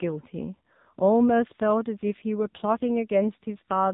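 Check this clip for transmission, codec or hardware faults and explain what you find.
One codec fault runs the whole clip: AMR narrowband mobile coding, its heavy damage consistent with a low mode near 6.7 kbps. Its pulse-driven vocal-tract model makes the speech buzzy and synthetic, with nothing above 3.8 kHz.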